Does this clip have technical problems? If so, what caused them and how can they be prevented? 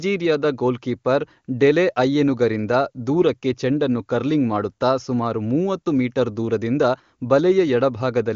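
No, this speech has come through the AMR wideband (HD Voice) codec at its top rate of 23.85 kbit/s, which keeps it clear, and the lack of content above about 7.2 kHz is simply that codec's normal bandwidth limit.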